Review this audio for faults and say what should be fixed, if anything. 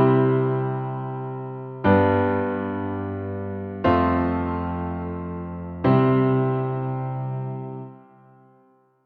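Nothing here needs fixing, since there's no fault to be heard anywhere in the clip.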